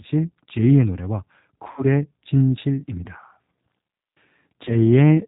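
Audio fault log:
throughout: G.729 codec, with plainly audible damage: rough, synthetic speech from the 8 kbit/s filter-and-pulse model, with nothing above 4 kHz.
1.71–1.84 s and 4.65–4.76 s: VoIP packet loss concealed by the speech codec. About 60 ms, then 20 ms, of missing audio is extrapolated into a buzzy tone or coloured noise that fades, and the voice stays weakened briefly afterwards.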